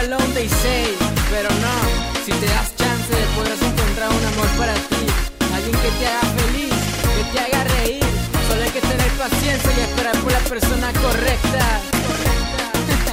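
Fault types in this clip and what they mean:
Nothing in this one stands out as a technical fault; it just sounds like ordinary, unbroken audio all the way through.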